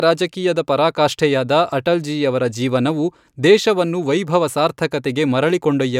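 No technical faults are audible.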